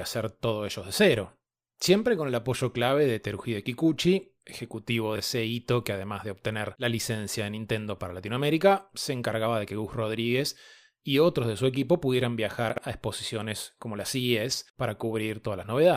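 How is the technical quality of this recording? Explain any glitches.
Two brief glitches spoil an otherwise-unremarked speech take: chunks out of order, at 5.16 to 5.2 s and again at 12.7 to 12.78 s. Audio seems to move in 20 ms chunks, and one arrived late, playing after the chunk that should follow it at 5.16 s, and after three at 12.7 s. Nothing's missing, but the shuffled order leaves three hard joins each time, so you hear a quick jumbled moment, longer at 12.7 s.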